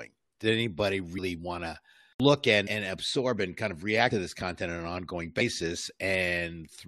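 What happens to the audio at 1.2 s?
Compressed frames skipped, from 1.17 to 1.19 s. A short run of coded frames never reaches the output, either missing from the stream or rejected by the decoder as corrupt, so playback leaps forward. The jump of roughly a tenth of a second fits about five frames of 23.2 ms each. Because adjacent frames overlap, the join sounds like a brief smeared blip in the speech, not a sharp click.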